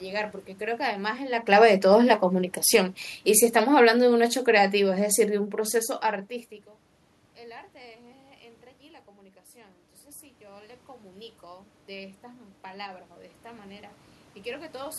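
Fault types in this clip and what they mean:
Automatic gain falling: the gain control judged the speech too loud and eased its gain down about 4 dB from 3.56 to 5.55 s, with the room background sinking along with it.
Automatic gain rising: once the input dropped roughly 14 dB, the control slowly brought its gain back up about 5 dB between 10.39 and 13.92 s, so speech and background swell together.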